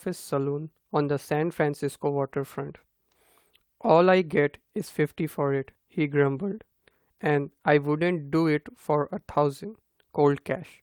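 No technical faults occur anywhere in the speech, so there are none to describe in time order.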